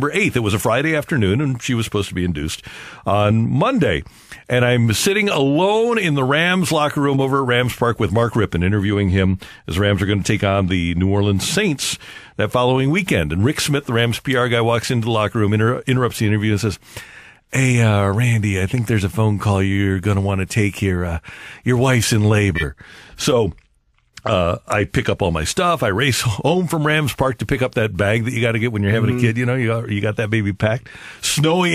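A short chirp-like blip cuts through the speech at 7.17 to 7.20 s, peaking around -15 dBFS, and a louder burst of noise follows at 22.55 to 22.63 s, reaching close to full scale. Both are corrupt frame decoded faults. Flipped bits in the compressed data led the decoder to rebuild frames with wrong gains and misplaced spectral energy. The first event's length fits a single damaged frame, and the longer second burst points to about two in a row.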